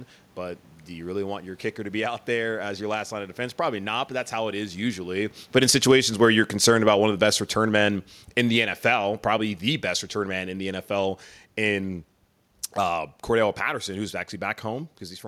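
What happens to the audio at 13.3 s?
Nothing goes wrong at 13.3 s: the speech carries on intact, with only the background noise of the room beneath it.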